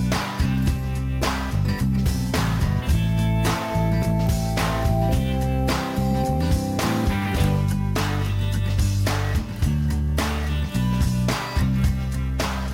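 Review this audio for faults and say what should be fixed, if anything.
Crude rate conversion runs through the whole clip. A gritty, inharmonic fizz rides on the sound and follows its loud and high-frequency parts. The pattern fits a conversion from 32 kHz to 44.1 kHz done by picking the nearest input sample, repeating samples with no interpolation or anti-imaging filter. That timing error recurs on a cycle set by the two rates, spraying shifted, non-harmonic copies of the content that sit roughly 25 dB below the signal. To prevent it, resample with a proper band-limited converter, such as a polyphase or windowed-sinc resampler, instead of nearest-sample selection.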